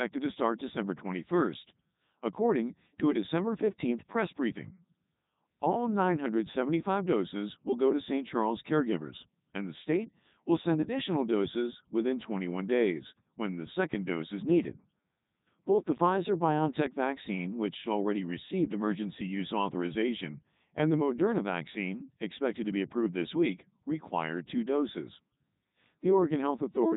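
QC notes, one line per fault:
Throughout, Codec 2 vocoder: buzzy, robotic speech rebuilt from sine waves, consistent with 3.2 kbit/s; spectrogram shows nothing above 3.8 kHz, waveform shape lost.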